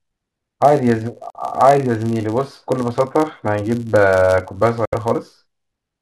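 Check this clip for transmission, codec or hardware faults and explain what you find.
Two faults are present in this speech clip: a constant block-rate buzz from a filter restarted on every block, and two short gaps consistent with Bluetooth dropout.

Filter restarted on every block, throughout: the filter discards its internal state at each block boundary and starts again from zero. Each restart produces a small transient, and these transients repeat at 100 Hz, which fits processing in 10 ms blocks. The result is a low buzz under the speech that rises and falls with its level.

Dropouts at 1.30 to 1.37 s and 4.85 to 4.94 s: the sound cuts out, then resumes further along, as though playback had continued during the silence. The first gap skips about 46 ms of audio, and the second skips about 70 ms, which fits two and three lost frames respectively. The likely cause is Bluetooth dropout: packets reached the headphones too late and were discarded, so the output stayed silent until the next good packets arrived.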